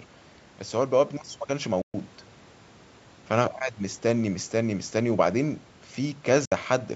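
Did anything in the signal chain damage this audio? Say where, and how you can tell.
Yes. A Bluetooth dropout hits the speech twice, from 1.82 to 1.94 s and from 6.45 to 6.52 s. The audio cuts to silence for about 122 ms and then 61 ms, and resumes further along as if it had kept playing. This points to the wireless playback link, likely packets reaching the headphones too late and being discarded, roughly six and three packets' worth. The call microphone processing's band limit near 8 kHz is normal, not damage.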